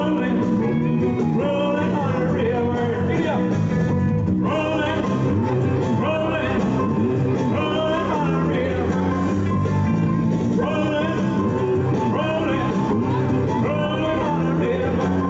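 No faults are audible anywhere in this audio.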